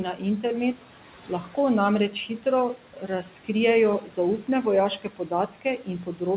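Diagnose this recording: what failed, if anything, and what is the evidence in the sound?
The failure sits in the call processing stage, where a noise suppressor is working too hard. Its artifacts run through the whole clip. The room noise, about 19 dB below the speech, is pulled down by roughly 11 dB between phrases and comes back under them, as the per-band gains change frame by frame. That pumping follows the speech level, which separates it from the coding noise and the 4 kHz band limit of the narrowband call codec.

The same suppressor also cuts speech, at 0.16–0.85 s, 1.28–1.57 s, 2.11–2.45 s, 2.76–3.49 s, 4.01–4.48 s and 4.99–6.21 s. In each span, brief stretches of soft speech, from a fraction of a second up to about half a second, drop by about 9 to 12 dB and sound swallowed or faint, because quiet speech energy was classed as noise and turned down with it. Unlike packet loss or buffer dropouts, there are no hard gaps, clicks or repeated fragments; the sound stays continuous and only sags in level.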